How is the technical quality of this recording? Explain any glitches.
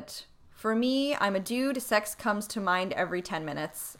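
The speech is marred by one interference fault. From 1.19 s, right after "for me", to the end, a DECT cordless phone buzz sits around 35 dB below the speech. A nearby handset or base transmits radio bursts every 10 ms, which the audio circuitry rectifies into a thin, steady 100 Hz buzz. A spectrogram shows evenly spaced horizontal harmonic lines at multiples of 100 Hz, and a zoomed waveform shows repeating spikes every 10 ms.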